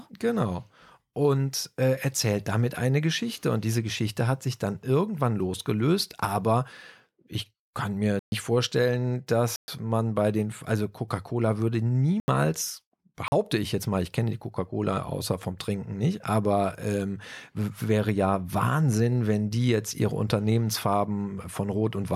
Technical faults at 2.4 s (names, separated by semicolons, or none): none